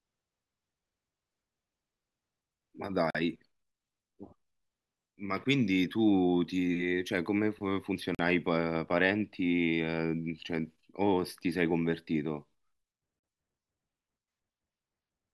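Short holes of silence, each 44 ms long, interrupt the speech at 3.10–3.15 s, 8.15–8.19 s and 13.19–13.24 s, spaced about 5 s apart. This is a gap between chunks: silence was inserted at each join between 5 s blocks, so no speech is lost, but it breaks abruptly.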